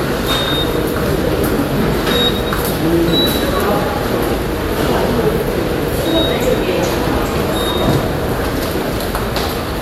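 No technical faults are audible.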